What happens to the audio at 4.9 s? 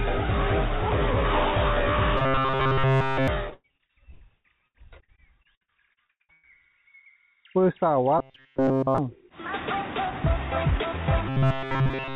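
At 4.9 s you're right in the middle of a stretch of repeated packet loss (robotic sound) running from about 3.50 to 6.45 s. Packets keep going missing, around 20 holes in that span with the longest about 104 ms, and each one gets patched by stretching the last bit of sound. With roughly a third of the stretch filled in that way, it comes out choppy and robotic, with pieces dropping out.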